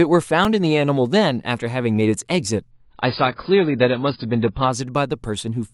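Right at 0.45 s there's a tiny glitch: a repeated buffer. The next chunk of audio didn't show up in time, so the playback device replayed the last one. Each repeat is only about 1.33 ms long, which fits a buffer of roughly 64 samples, and it went round a couple of extra times. At that size you don't get a recognisable stutter, just a quick click or brief buzz, with a few milliseconds of real audio lost.

From 2.71 s to 4.71 s the speech suddenly goes dull. That's an adaptive stream at a lower bitrate: the connection slowed, so the player switched to a much leaner version of the stream, which sounds consistent with AAC dropping from something like 96 kbit/s to around 16 kbit/s. Nothing above about 5.1 kHz survives, so the top end is simply gone and codec artefacts creep in. The switch happens abruptly with no gap, and quality snaps back at 4.71 s.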